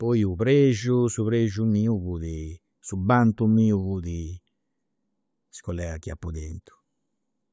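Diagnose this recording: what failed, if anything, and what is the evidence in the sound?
Nothing failed: every stage of the chain held up.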